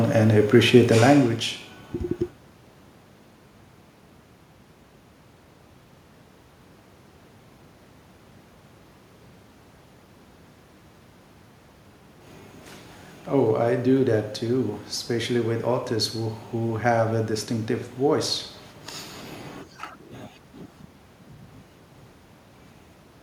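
The recording contains no audible technical faults.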